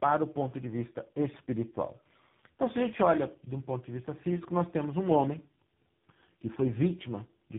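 Tandem speech coding runs throughout this speech clip. The sound points to four speech codecs in a row, likely ending in AMR-NB, each re-encoding the previous decoder's damaged output. The result is rough, warbly, muffled speech with nothing above 3.8 kHz.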